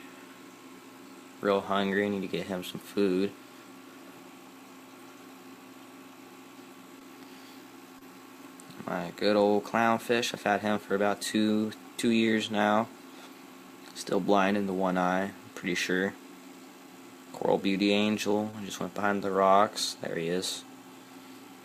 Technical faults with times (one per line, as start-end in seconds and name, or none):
6.99-7.02 short concealed packet loss
7.98-8.03 short concealed packet loss
18.51-18.55 short concealed packet loss